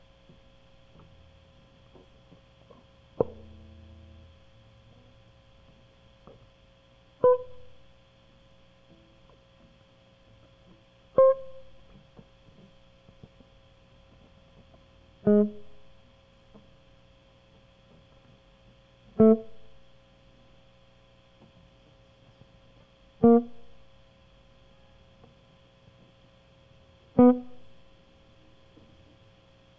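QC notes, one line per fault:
Nothing stood out on listening to this music.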